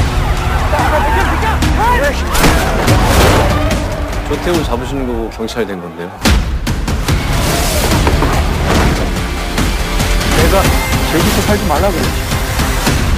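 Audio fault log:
Throughout, sample clock jitter: the converter's timing wobbles by around ten microseconds, so each sample lands a touch early or late. Fast-moving, loud and bright parts pick up a gritty hiss roughly 20 dB below the signal, which drops away in the quiet stretches.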